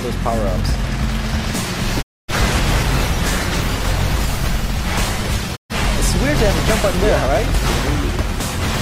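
At 2.01 s the sound quickly fades out over about 20 ms and stays silent until 2.34 s. It's a digital broadcast dropout: the receiver stopped getting good frames and muted until clean ones arrived. Roughly a quarter second of programme is simply gone, which fits about six lost frames. The same thing happens again from 5.55 to 5.74 s, a shorter hole with the same quick fade, consistent with about three frames missing.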